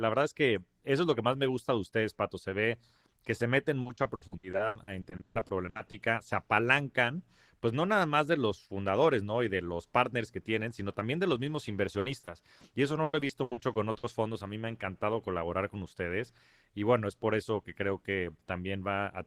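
Repeated packet loss (robotic sound) breaks up this speech clip from 3.81 to 5.95 s, between "ve que se meten" and "se apalancan pues no", and again from 11.99 to 12.65 s after "también de los mismos" and from 13.03 to 14.05 s. Audio keeps going missing in quick succession, gaps up to 140 ms, and each hole is bridged by stretching the preceding sound, covering roughly 38, 21 and 39 percent of those stretches and leaving a choppy delivery with pieces missing.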